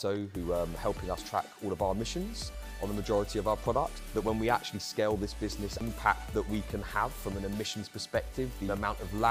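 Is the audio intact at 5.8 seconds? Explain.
No. At 5.80 s there is a brief tick and a mute of only a few milliseconds, after which the audio resumes from a different point. This is a CD skip: a knock or disc flaw jolted the laser onto another turn of the spiral track.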